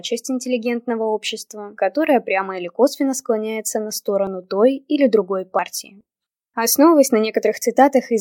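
At 4.27 s and 5.59 s, the sound skips ahead by about 10 ms, then 30 ms. The likely cause is a dropped buffer (overrun), with samples overwritten before being read.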